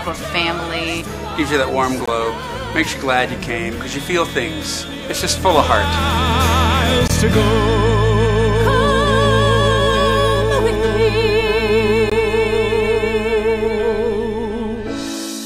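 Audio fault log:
2.06–2.08 s, 7.08–7.10 s, 12.10–12.12 s: gap between chunks. Each 20 ms silence recurs every 5.0 s where separately delivered chunks join. Unlike a dropout, the audio resumes exactly where it stopped, so nothing is missing, only delayed.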